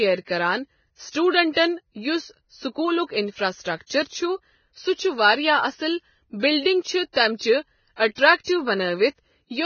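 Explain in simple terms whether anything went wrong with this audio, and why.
Something did go wrong, and it lasts the whole clip. The speech sounds dull and hissy, as if heard through a cheap phone, with a grainy, rough edge on the voice and smeared consonants. There is nothing above about 6.6 kHz, so the crisp top end is gone. The likely cause is heavy Vorbis compression: to save space, the encoder threw away the highest sounds and stored the remaining fine detail so crudely that it turned into noise.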